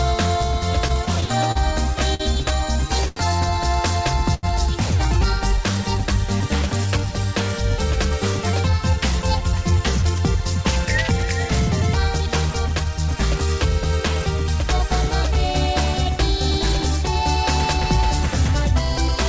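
Audio passed through a call link, and the lack of anything above 8 kHz fits a wideband G.722 codec at around 64 kbps. Between 0.88 and 2.22 s it stutters with repeated stalls. There are six brief holds in that stretch. Together they add about 136 ms, roughly a tenth of the span. The longest lasts 52 ms. Packets were reaching the receiver late, so its jitter buffer kept running dry. Each time, it held the last sound until the stream could continue. Nothing is lost, but the sound drags and catches.

Two single short stalls follow, each from a late packet. The first runs from 3.08 to 3.18 s and lasts 82 ms. The second runs from 4.34 to 4.45 s and lasts 86 ms. In both, one packet missed its slot. The buffer emptied and the receiver stretched the sound it already had. When the packet came, playback resumed where it had stopped. You hear a sound held too long, with a faint buzz or sag.

From 7.98 to 11.24 s there is a jitter buffer speed-up. 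Playback runs at 104 percent with the pitch unchanged. The buffer had built up more audio than it wanted, likely after late packets arrived in a bunch. To shed the extra delay, the receiver cut many tiny pitch-period slices. In all it removed something like 150 ms.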